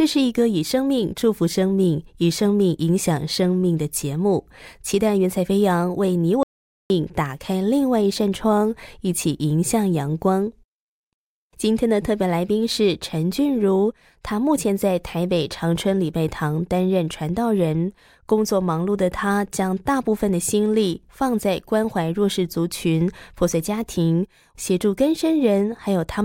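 At 6.43 s the speech cuts off mid-flow into dead silence, with no room tone or background hiss underneath, and it resumes abruptly at 6.90 s, leaving a gap of about 470 ms in which whatever was being said is simply missing. This is an audio dropout to silence: the input signal was likely lost briefly, through a momentary disconnection, link failure or accidental mute, while the recording chain kept writing silence.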